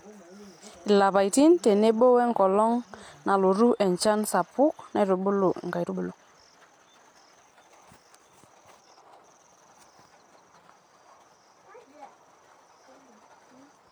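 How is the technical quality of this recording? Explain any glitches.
One glitch stands out. Time-stretched section, 5.82 to 9.22 s, right after "nalotu enchan sapuk naitubulu": the speech abruptly runs about 1.65 times faster with unchanged pitch, sounding rushed. This likely comes from software squeezing the passage to fit a shorter length by discarding short slices to preserve pitch.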